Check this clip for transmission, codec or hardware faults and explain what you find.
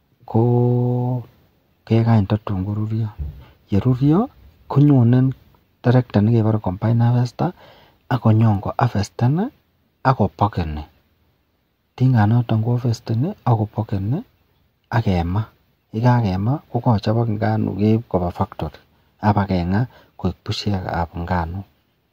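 Nothing stood out on listening to this speech recording.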